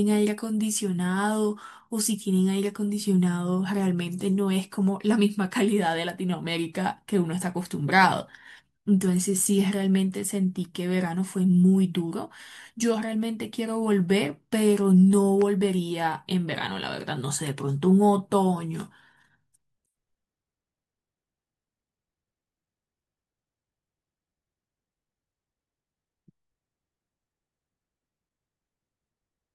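At 15.42 to 15.44 s a single loud pop cuts across the speech, peaking a few decibels above it while the talking continues underneath. It is likely a sudden voltage step or pulse, such as a plug, switch or static discharge, entering the signal path. On a waveform it shows as one tall, narrow spike standing above the speech envelope; on a spectrogram, as a thin vertical stripe of energy spanning the whole frequency range.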